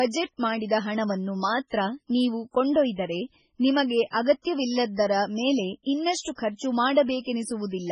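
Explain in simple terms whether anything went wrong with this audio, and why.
MP3 compression, throughout the clip: the speech sounds watery and dull, likely from heavy MP3 encoding that removes everything above 10.5 kHz and throws away quieter detail.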